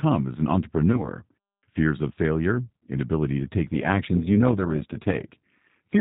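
Throughout, G.729 coding rebuilds the speech from a filter and sparse pulses, fitting an 8 kbit/s stream: rough, synthetic, with the spectrogram empty above 4 kHz. From 0.92 to 1.08 s, after "as an", VoIP packet loss concealed by the speech codec covers about 20 ms of missing audio with a decaying extrapolation of the last sound; the waveform sags before "fears of failure inability" recovers. From 3.74 s to the end, after "failure inability to take", overlap-add ripple gives a metallic buzz with extra tones around the voice: the envelope swings by about 11 dB around 200 times per second, visible as regular vertical striping.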